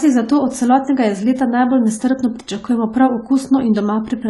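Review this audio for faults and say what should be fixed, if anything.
Throughout the speech, nothing is present above 11.5 kHz and coding damage is plainly audible, likely AAC compression at a low bitrate, consistent with AAC-LC near 32 kbps. Prevent this by encoding at a higher bitrate or keeping an uncompressed master.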